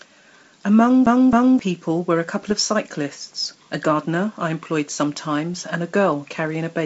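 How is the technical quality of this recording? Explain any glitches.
Two kinds of glitch affect this speech recording, which comes through G.722 wideband telephone coding with at most a faint upper-band hiss.

From 1.06 to 1.59 s the CD gets stuck on one turn. A scratch throws the laser back each rotation, so a 267 ms slice plays twice with a brief mute at each jump, giving an even stutter.

At 2.42 to 2.52 s and 5.54 to 5.64 s, bit errors on the ADPCM link, at a fraction of a percent, upset the decoder's predictor and step size. The result is pops and rough bursts with brief level jumps.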